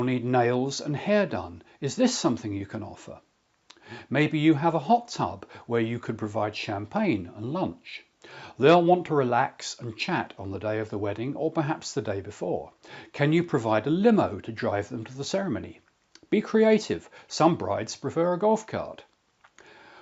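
No technical faults are audible.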